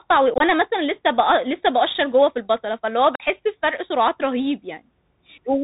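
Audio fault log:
Throughout: Bluetooth CVSD headset codec. The speech is narrowband, with nothing above 4 kHz. The damage is plainly audible. The coder sends one bit per sample, up or down, and adapts its step size. This fits a 64 kbps CVSD link. Loud high sounds outrun the step and distort. S sounds turn scratchy. A fine granular hiss sits under the speech.
0.34 to 0.41 s and 3.15 to 3.22 s: unconcealed Bluetooth headset packet loss. Short voice packets between headset and phone went missing. Silence or an idle pattern filled the gaps, with nothing to smooth them over. In the first event, 37.5 ms is lost across 60 ms, and the longest hole is 22.5 ms. This points to a handful of lost packets and sounds choppy and crackly. The second event loses 45 ms, which points to around seven packets. The holes have abrupt edges. Through the CVSD link the speech returns briefly quieter.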